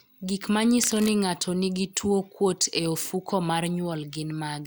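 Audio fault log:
0.83–1.13 s, cable scratch noise: a dense, uneven burst of scratching and rustling sits over the speech for about 0.3 s, ending just before "ng'ato nigi tuwo kuot". It is fairly loud, roughly 10 dB below the speech. The likely cause is a worn cable, connector or control being moved. Its contact resistance then jumps about rapidly. Each jump adds a small crackle, and together they form this rough, irregular noise.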